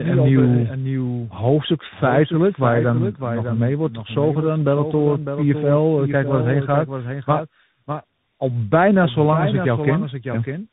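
Throughout the speech, a doubled audio track is audible: a second, full-band copy of the same speech trails the original by about 0.7 s, roughly 10 dB quieter, with no room colour or decay. Most likely a slower capture path picked the signal up twice.

Also present from start to end is tandem speech coding. Nothing is left above 3.8 kHz, and the speech sounds rough, muffled and warbly, which points to two speech codecs in sequence, AMR-NB and then CVSD, the later one re-encoding the already degraded output of the earlier.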